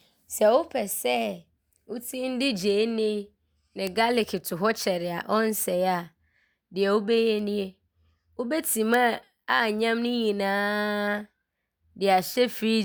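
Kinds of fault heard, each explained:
Bit error spike: a single flipped bit in one sample makes the value jump by a power of two and return at once, producing a broadband tick unrelated to the speech. Three occur, at 3.87, 7.39 and 8.94 s, peaking around -8, -26 and -8 dBFS.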